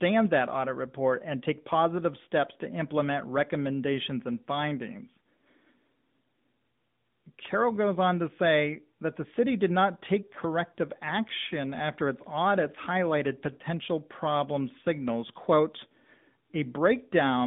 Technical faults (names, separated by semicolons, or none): AMR narrowband mobile codec